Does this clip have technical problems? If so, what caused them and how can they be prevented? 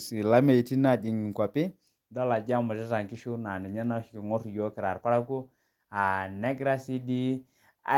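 No, there are no technical problems to point to in this speech clip. With nothing to trace back to a cause, there is nothing here that needs preventing.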